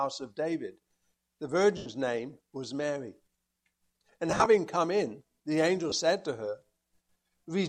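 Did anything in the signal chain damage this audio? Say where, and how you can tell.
Yes, lost LE Audio frames on the Bluetooth link: 1.77–1.86 s, 4.30–4.46 s (scattered, longest run around 30 ms) and 5.90–5.92 s. The LC3 decoder concealed them by repeating the last spectrum with random signs, so spectrogram harmonics smear into noisy bands that fade.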